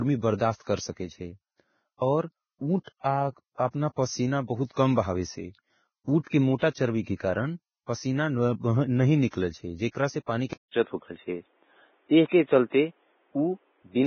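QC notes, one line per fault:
Throughout: Vorbis compression, heavy, with nothing above 6.5 kHz. The treble is quantised so coarsely that fine detail turns to grainy hiss of similar energy, roughening tones and blurring attacks. This likely comes from low-bitrate Vorbis encoding, fitting roughly 16 kbps.
10.53 to 14.06 s: input switched to a poorer device, right after "जे क्रासे पानी के". A 200 ms silence marks the switch. The band then stops at 3.8 kHz, the level shifts by around 5 dB, and new background noise sits roughly 45 dB below the signal. The likely cause is a change to a narrower-band microphone or headset profile.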